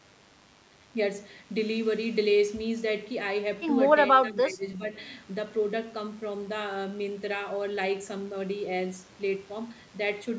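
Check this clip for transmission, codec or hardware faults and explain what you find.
Two faults turn up in this speech clip, one running the whole way through and one brief dip in the middle.

DECT cordless phone buzz sits under everything from start to finish. A nearby DECT handset or base fires a radio burst every 10 ms, and the audio circuitry rectifies it into a thin, steady 100 Hz buzz packed with harmonics, roughly 30 dB below the speech.

Between 4.16 and 4.83 s the talker drops by up to about 10 dB for around half a second in total. That's likely speech suppressed in double talk: with both sides talking, the echo canceller couldn't tell the talker from loudspeaker echo and turned everything down.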